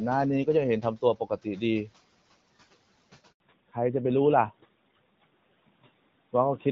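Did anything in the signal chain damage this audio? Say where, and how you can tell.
Yes. At the network stage, a handover gap runs from 3.32 to 3.40 s. The speech collapses to silence almost instantly and stays dead for 80 ms before sound returns. Nothing decays naturally into that hole, so it isn't a pause by the talker. It is what you get when the call moves between networks and no speech frames are delivered during the switch. Whatever was said in those 80 ms is gone.

From 3.40 s to the end, the codec stage shows a fallback to narrowband. Before the gap, the speech reaches up to about 7 kHz, consistent with HD Voice on AMR-WB at roughly 12.65 kbit/s. After it, nothing above 4 kHz remains, leaving a duller, rougher, boxier sound. That hard ceiling fits renegotiation to AMR-NB, probably at its 12.2 kbit/s mode.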